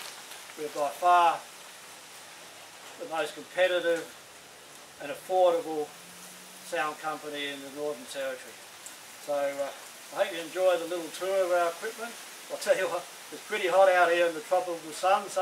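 No technical faults can be heard anywhere in this recording; the signal stays intact and continuous throughout.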